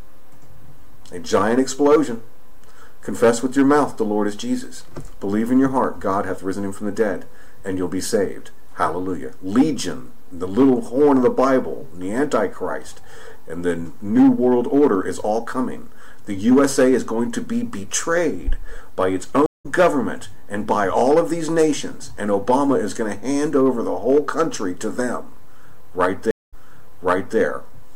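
Stream reconnects at 19.46 s and 26.31 s: the connection dropped and a fresh decoder restarted mid-stream. A 185 ms gap skips roughly 0.2 s ahead; a 216 ms gap replays the previous 0.86 s.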